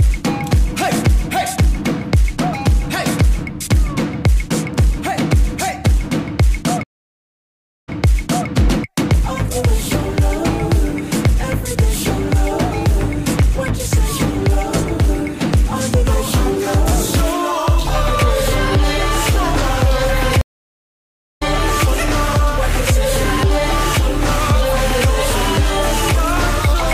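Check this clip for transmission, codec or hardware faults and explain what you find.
Two stream reconnects occur, at 6.83–8.48 s and 20.41–21.43 s. Each time the connection dropped and a fresh decoder restarted mid-stream. The waveform shows a flat gap of about 1 s, a blank column on a spectrogram. The first resumes 0.63 s earlier, repeating audio; the second resumes about half a second later, skipping some.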